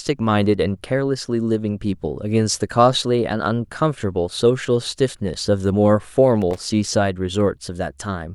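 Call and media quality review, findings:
Loose connector crackle, 6.42–6.58 s. Irregular burst of scratchy crackle, about 170 ms long, cutting through the speech. Probable component: worn or dirty contact in a plug or jack. Mechanism: contact moving, rapidly making and breaking, chopping the signal. Action: reseat or replace connector, clean contacts, recheck.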